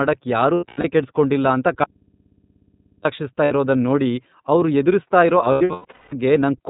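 The whole clip carries the iLBC codec at 13.33 kbps with 30 ms frames: band-limited below 4 kHz, with a rough, synthetic edge that marks it as a low-rate speech coder rather than plain filtering.

From 0.54 to 0.85 s, just before "ಕೆಡ್ಸಿ ಕೊಂಡಿಲ್ಲ ಅಂತ", lost iLBC frames leave about 210 ms missing, scattered across 300 ms with runs up to around a tenth of a second. The decoder fills these gaps with a buzzy, held vowel-like tone. Unlike a dropout, the sound is clean again almost immediately after.

From 1.84 to 3.05 s, between "ಕೆಡ್ಸಿ ಕೊಂಡಿಲ್ಲ ಅಂತ" and "ಇರೋದನ್ ನೋಡಿ ಅವ್ರು ಎದುರಿಸ್ತಾ", the speech cuts off abruptly for 1.21 s, leaving only hum about 35 dB down. This audio dropout to a faint residue was likely caused by the signal being lost while an open input stayed live. Unlike concealment, nothing is synthesised to fill the gap.

Further lost frames follow. At 3.44–3.52 s, 60 ms is briefly buzzy. 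After "ನೋಡಿ ಅವ್ರು ಎದುರಿಸ್ತಾ ಇರೋ", from 5.51 to 6.13 s, 480 ms is lost across 600 ms, with a longest run of about 200 ms.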